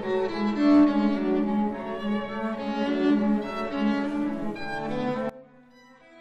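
Right at 5.29 s there's a sudden gain jump: the whole signal, sound and background noise together, drops by about 20 dB in a single step and stays down to the end. That's likely a digital gain setting applied instantly, without any ramp.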